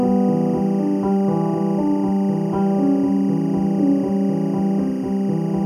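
From start to end, timecode bleed runs under the sounds. Linear timecode running at 23.976 frames per second has leaked in from an adjacent track or cable. It is a chirping warble switching between roughly 1 and 2 kHz, sitting around 30 dB below the sound. On a spectrogram it appears as persistent horizontal bands at those two frequencies.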